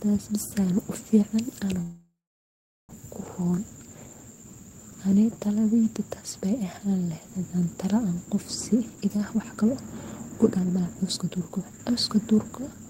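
At 1.81 s there's a call audio freeze lasting about 1.08 s. The last sound smears out and then sits silent for 0.76 s, likely because delayed packets drained the jitter buffer, and the audio resumes without losing anything. Then come two jitter buffer speed-ups, at 8.73–9.72 s (133%, about 0.3 s trimmed) and 10.51–12.87 s (129%, about 0.7 s). Pitch-period snippets get cut, so the speech sounds hurried but keeps its pitch.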